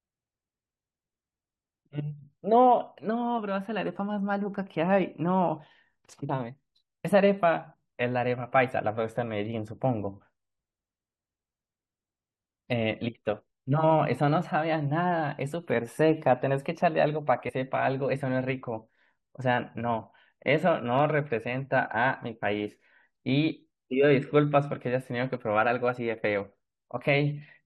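At 6.28 s the speech is briefly disrupted for about 16 ms. It is damaged data in a compressed stream. Bytes in the encoded audio were lost or corrupted. The decoder misread the frames there and lost sync until it found the next valid frame header. A second, similar fault runs from 17.48 to 17.50 s, lasting about 20 ms. Both briefly disrupt the speech.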